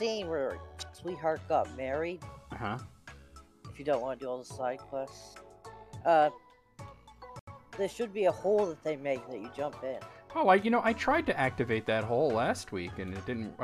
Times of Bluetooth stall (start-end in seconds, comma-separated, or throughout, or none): 7.39-7.47